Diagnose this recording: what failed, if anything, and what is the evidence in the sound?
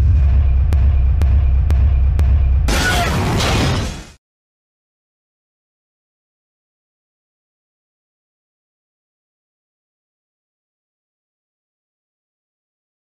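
Broken-record loop from 0.73 s to 2.68 s: a fragment of about 0.49 s plays four times back to back, each repeat identical, before the sound moves on. Whatever should have filled those two seconds never arrives. The exact, seamless repetition of one fixed-length chunk points to the playback or streaming buffer stage. The player or stream likely stalled and kept re-sending the last block it held until new data came through.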